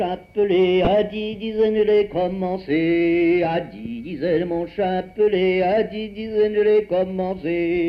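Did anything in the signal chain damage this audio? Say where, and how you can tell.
Yes. DAB burbling at 0.85 to 0.87 s, a few brief watery blips lasting about 26 ms, which fits a single corrupted MP2 frame. The damage happens at the codec stage, on the broadcast reception side. Weak reception lets a small fraction of bit errors slip past the error correction into the MP2 data. Corrupted samples put short blips of noise into individual sub-bands for that one frame, which produces the watery blips over the sound.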